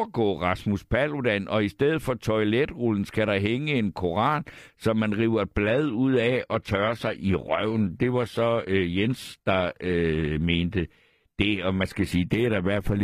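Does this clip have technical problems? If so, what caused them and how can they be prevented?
Yes. Right after "som man river et", at 5.64 s, the speech switches abruptly to an adaptive stream at a lower bitrate and stays there to the end. The sound drops without a gap into a thinner treble with more codec artefacts. That fits the player stepping down from roughly 96 kbit/s AAC to about 20 kbit/s HE-AAC because throughput fell. On a spectrogram the upper band turns patchy and smeared, with nothing above 14.9 kHz. The waveform shows no break. Securing steadier bandwidth, or buffering more before playback and setting a higher minimum rendition, prevents the downshift.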